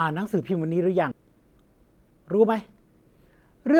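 A skip ahead at about 1.11 to 1.13 s in this speech clip drops roughly 0.4 s of audio with no fill, so the two sides of the cut are butted together and the sound jumps forward abruptly. The missing stretch was most plausibly discarded in transit or by an overflowing jitter buffer while later packets were already queued, which pulled the playout delay down by around the same 0.4 s in one step.

A jitter buffer speed-up follows from about 1.22 to 2.49 s, where the speech runs at roughly 108% speed with its pitch unchanged, giving a slightly hurried, compressed delivery. Too much audio had built up in the buffer, so the receiver trimmed it back by cutting many short pitch-period-length slices in quick succession, removing about a tenth of a second in total across that span to bring the delay back toward its target.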